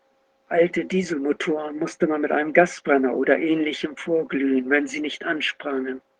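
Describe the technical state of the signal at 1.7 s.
At 1.7 s the speech is intact, with no fault in the signal beyond the light coloration of the Opus voice compression it passes through.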